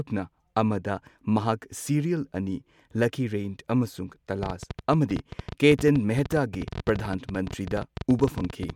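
From 4.43 s to 8.71 s, uneven ticking and popping runs over the speech, around fifty clicks at about 13 per second, peaking roughly 5 dB above it. This train of clicks is likely interference from nearby equipment or a faulty connection or power supply.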